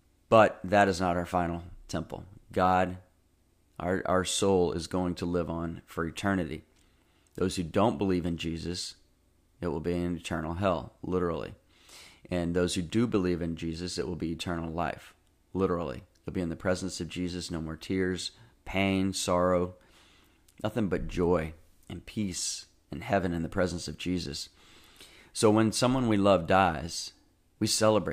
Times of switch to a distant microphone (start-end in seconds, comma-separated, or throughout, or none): none